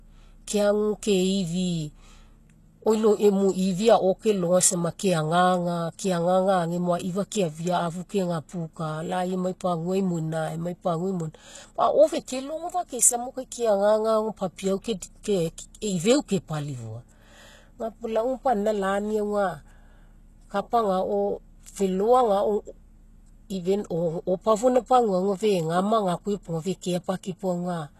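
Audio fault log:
Throughout, HE-AAC compression: the speech carries a plainly audible gritty, metallic edge on s sounds and other hiss-like consonants, and nothing is present above 12.3 kHz. The treble sounds synthetic, likely because only the lower spectrum was coded and the top band was rebuilt by copying lower bands upward under a coarse envelope. The copied harmonics don't line up with the real ones, and the damage points to a bitrate near 16 kbps.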